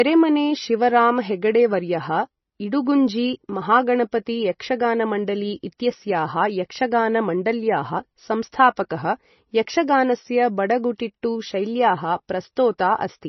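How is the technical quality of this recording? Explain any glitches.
Quality is poor throughout. The speech carries nothing above 6 kHz, so it sounds dull and muffled. S sounds turn watery and swirly, with metallic chirps, and consonant attacks smear. The likely cause is heavy MP3 compression. Short of bits, the encoder cut the treble at a fixed frequency and zeroed weak frequency lines, which flicker on and off between frames. The damage fits a bitrate near 24 kbps.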